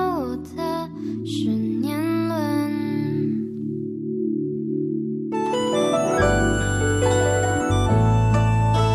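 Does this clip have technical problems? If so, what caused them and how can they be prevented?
Yes. A corrupt frame decoded at 6.08 to 6.12 s produces a short glitch. Damaged bits in a few compressed frames made the decoder rebuild energy at the wrong frequencies, peaking around -20 dBFS. Protecting frames with checksums and concealing any that fail would prevent it.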